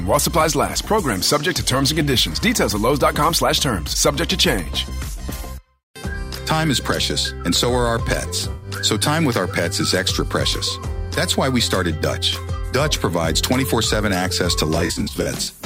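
At 8.52 s there's a smeared, noisy patch lasting about 0.16 s. That's AAC frame loss with concealment: roughly 107 ms of audio went missing, which fits about five frames, and the decoder papered over it by reusing the last good spectrum. Later, from 14.75 to 15.48 s, losses are scattered across about 0.73 s, totalling around 320 ms in short gaps of a few tens of milliseconds each, so the sound turns smeared and phasey rather than fading out.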